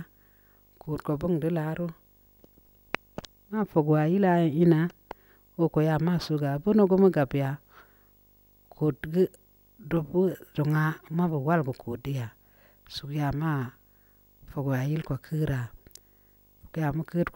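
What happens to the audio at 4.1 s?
Video or display buzz sits under the speech at 4.1 s, as it does across the whole clip. A screen or video cable is coupling into the audio path, adding a 50 Hz field-rate buzz with hash above it and a faint 15.6 kHz line-rate whine, roughly 35 dB below the speech.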